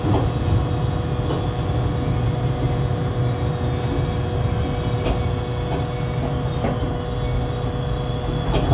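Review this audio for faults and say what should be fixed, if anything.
Nothing here needs fixing; no faults are audible.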